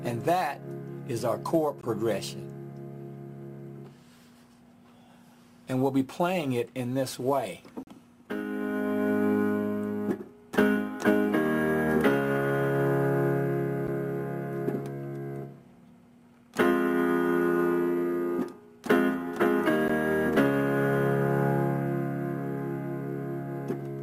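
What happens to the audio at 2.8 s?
Nothing goes wrong at 2.8 s; the audio plays through that moment intact, with no dropout, click, glitch or other fault.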